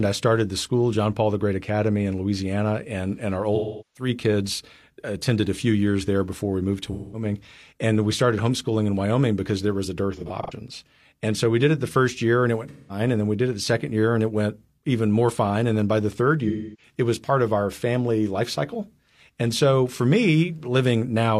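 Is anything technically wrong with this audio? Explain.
Yes. AAC frame loss with concealment hits the speech at 3.55 to 4.09 s, 6.92 to 7.24 s, 10.14 to 10.53 s, 12.68 to 13.00 s and 16.48 to 16.93 s. Missing frames, about 384 ms in the longest gap, are filled from the last good spectrum, so each patch sounds smeared and phasey. Around 10.1 s the losses are scattered, the longest run only about 100 ms.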